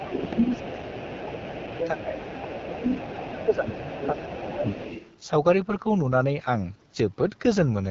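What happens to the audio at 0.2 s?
At 0.2 s the talker's level is pulled down by speech suppressed in double talk, a dip spanning 0.0 to 2.19 s. The likely cause is an echo canceller that cannot separate the talker from loudspeaker echo while both sides speak, so it attenuates everything. That gives chopped dips of up to around 15 dB, totalling about a second and a half.

From 0.17 s to 5.13 s, the other side's voice leaking through is audible. It is a second voice sitting roughly 15 dB under the main speech, likely residual loudspeaker echo the canceller failed to remove from the microphone. It comes through beneath the talker.

Underlying this moment, as across the whole clip, is the AMR wideband (HD Voice) codec at a rough, raspy low rate, which fits the 8.85 kbit/s mode. The band ends at 7.6 kHz, and the coarse pulse-excited vocal tract model adds plainly audible grit to the speech.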